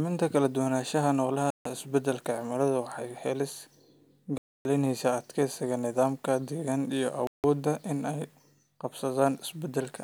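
The speech cuts to dead silence three times, at 1.50 to 1.66 s (150 ms), 4.38 to 4.65 s (about 270 ms) and 7.27 to 7.44 s (about 170 ms), the last right after "deegaanka iyo". Each is a likely Bluetooth stall: the headphones ran out of buffered audio while packets were resent. The gaps are true silence, not muffled or smeared sound.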